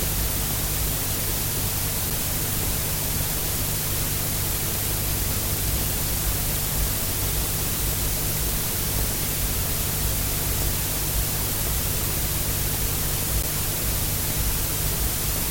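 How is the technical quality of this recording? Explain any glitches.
One glitch stands out: a block of digital silence at 13.42 s. For about 11 ms, fitting a 512-sample buffer, the audio drops to nothing and returns with no fade, because the output buffer went unfilled or a calculation produced invalid values. At this length it comes across as a tick or brief dip rather than an audible gap.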